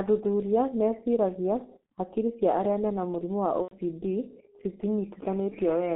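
A speech clip squeezed through the G.723.1 codec the whole way, heavily damaged: the low bitrate, which fits about 6.3 kbit/s, and the narrow 200 Hz to 3.4 kHz band leave it muffled and hoarse, with smeared consonants because the codec tracks the voice only coarsely. Then, right after "arĩa mena mũrimũ wa", there's VoIP packet loss concealed by the speech codec from 3.62 to 3.73 s. Roughly 90 ms goes missing, and the decoder papers over it by stretching the last sound into a fading smear, with things staying weak or distorted just after.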